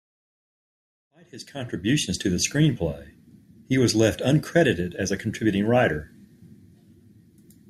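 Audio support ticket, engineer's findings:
Nothing stood out on listening to this speech clip, which opens with a smooth fade in from about 1 s up to full level at 2.43 s.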